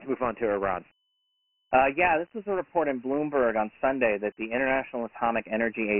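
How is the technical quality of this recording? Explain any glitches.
The quality is poor, with one fault running through the whole recording. Dialogic VOX ADPCM, throughout: the speech appears to be stored as 4-bit adaptive differential samples, which fits a 24 kbps stream at 6,000 samples a second. Nothing survives above 3 kHz, the lows are thinned below 250 Hz, and heavy coding damage leaves a gritty hiss trailing each stretch of speech.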